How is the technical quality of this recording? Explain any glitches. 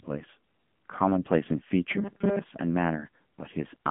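The quality is phone-grade throughout. The whole clip carries the AMR narrowband mobile codec. Nothing passes above 3.7 kHz, and the band runs from about 150 Hz to 3.5 kHz. The speech sounds buzzy and synthetic. Each 20 ms frame is rebuilt from a vocal-tract model and a few pulses in each 5 ms. The damage fits the 7.95 kbps mode.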